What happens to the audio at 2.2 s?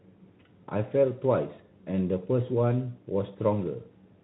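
Nothing goes wrong at 2.2 s; the speech carries on intact through the Speex coding, with its band ending just below 3.9 kHz.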